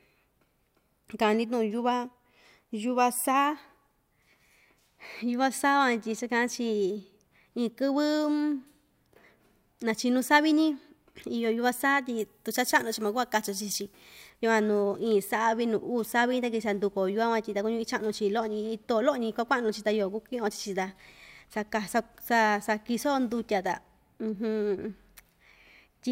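From 12.19 to 14.30 s the speech turns thin and bright, with hard, spitting sibilants: pre-emphasis left on. A treble boost was applied ahead of recording or transmission, but the complementary de-emphasis cut was never made on the way back, so the lift stays in the signal. The top end sits about 10 dB higher at 10 kHz than at 1 kHz, a shape that fits the FM 50 µs curve.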